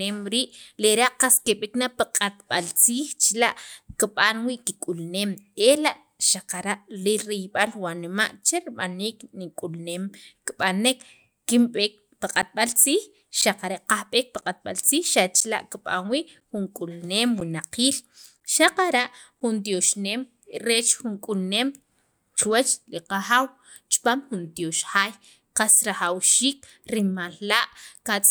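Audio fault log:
12.42 to 19.41 s, periodic USB or driver dropouts: something in the system stalled the USB bus or audio driver about once every 1.0 s, and each stall lost roughly 10 ms of audio, filled with silence. Seven or so such gaps fall evenly through this stretch of speech, each cutting the signal abruptly, so they come across as a steady train of ticks or small pops that are heard only while speech is present.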